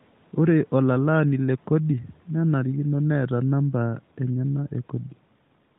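Nothing stood out on listening to this speech clip, with room noise sitting well below the speech and the AMR narrowband mobile codec carrying it at what sounds like a 12.2 kbps rate.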